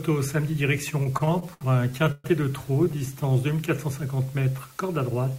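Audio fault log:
throughout, low bit depth with dither: a steady, even hiss sits about 25 dB below the signal. The audio is rounded to roughly 8 bits, and the dither turns the rounding error into white noise instead of distortion. On a spectrogram this appears as a uniform noise floor across all frequencies, and on the waveform as constant fine fuzz.
1.03–2.27 s and 2.84–3.23 s, repeated stalls (stutter): data arrived too late to keep the playback buffer filled, so the receiver held the last sound over each wait. Nothing is dropped, but the audio drags and judders. In the first run, held sound fills about 310 ms, with the longest hold 126 ms. The second run has only brief holds of up to 13 ms. A spectrogram shows smeared, repeated frames, and the waveform shows looped fragments.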